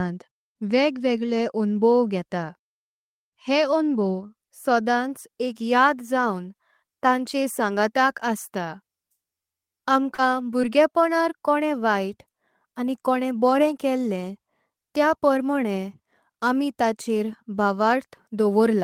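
At 9.90 s a packet of the speech was lost, and the decoder rebuilt it from the low-bitrate copy carried in the following packet. This is a lost packet rebuilt from error correction. The 10 ms frame plays without a gap but sounds briefly rougher and noisier than the speech around it. The same repair happens at 10.18, 10.39 and 10.63 s, each one 10 ms of grainy, coarser sound.

From 10.14 to 10.19 s, about 40 ms of audio did not reach the decoder in time. This is a short concealed packet loss. The receiver filled about 37 ms by extending the last sound, following its pitch where the speech was voiced and using shaped noise where it was not, then blended back into the real signal. The result is a brief smear or wobble. At 10.62 s a smaller concealed loss covers 10 ms of missing audio, of which 8 ms was filled, and it comes across as a brief smear or wobble.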